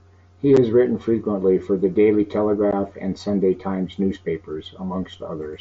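A brief hole with abrupt edges cuts into the speech at 0.57 s, just before "written frequently for the", and a second gap, twice as long, follows at 2.71 s. This is unconcealed Bluetooth headset packet loss: audio travelling between headset and phone went missing, and silence or an idle pattern took its place with nothing to smooth it over. The gaps last 7.5 ms and then 15 ms, which fits one and then two lost mSBC frames on the wideband link.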